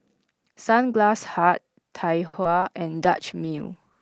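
At 2.27 s a short stall from a late packet holds the speech for about 60 ms, until 2.35 s. The jitter buffer ran dry, so the receiver stretched the last sound and then resumed where it left off. Nothing is lost, but the syllable drags with a slight buzz or dip, and playback runs 60 ms later from then on.

Two short concealed packet losses follow, at 2.43 to 2.46 s and at 2.60 to 2.64 s. In each, 20 ms of real audio never arrived. The decoder extended the preceding sound to cover the hole, giving a brief smear or wobble.

From 2.92 s to the end, a call bitrate drop takes the Opus stream from 32 to 10 kbps. The coarser coding makes the speech rough and watery, and it loses top end compared with the 8 kHz-wide audio before it.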